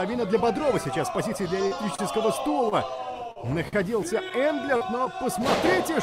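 At 1.67 to 1.74 s, a short concealed packet loss: about 40 ms of audio never reached the decoder in time, and the receiver filled the gap by extending the preceding sound, either from its pitch or as shaped noise, before blending back into the real signal. It comes through as a brief smear or wobble.

At 1.95 to 2.02 s comes the first short stall from a late packet. The jitter buffer ran dry waiting for a packet, so the receiver stretched the last sound by 33 ms and then resumed exactly where it left off. Nothing is lost, but a sound is held too long, with a buzz or dip. The same stall recurs at 2.69 to 2.75 s (29 ms) and at 3.68 to 3.76 s (43 ms).

Between those, at 3.32 to 3.39 s, another concealed loss drops about 40 ms and leaves the same smeared patch, running roughly 10 ms longer than the audio it replaces. The last concealed loss, at 4.77 to 4.84 s, again removes about 40 ms and blurs the sound in the same way.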